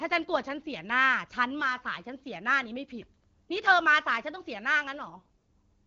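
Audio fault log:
5.14–5.50 s, AMR bit errors: Near the end, the sound turns hoarse, scratchy and gargly while pitch and level roughly hold. Flipped low-priority bits misplace the excitation pulses and skew fine pitch, gain and spectrum values. The AMR wideband (HD Voice) codec decodes cleanly outside this span.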